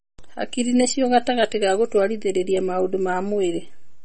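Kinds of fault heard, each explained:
MP3 compression: The speech sounds watery and swirly throughout, with plainly audible damage: faint detail flickers in and out, and s sounds and consonant onsets come out smeared and metallic. Nothing reaches above about 8.4 kHz, so the top end is missing. The likely cause is heavy MP3 encoding at a low bitrate, around 32 kbps, where the encoder ran short of bits, cut the treble at a fixed point and dropped the weaker frequency components from frame to frame.
Pre-emphasis left on: For the first 2 seconds the speech sounds thin, bright and hissy, with sibilants pushed forward; after that the tonal balance settles down. The treble was boosted, by about 14 dB at 10 kHz relative to 1 kHz, in the shape that fits the 75-microsecond FM broadcast curve, and the matching de-emphasis cut was never applied on playback, leaving the high frequencies far too strong.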